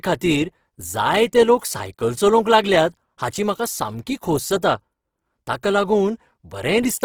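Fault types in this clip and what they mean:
Opus compression: speech sounds grainy and rough throughout, band energies kept but detail filled with noise, likely from Opus music mode at roughly 16 kbps.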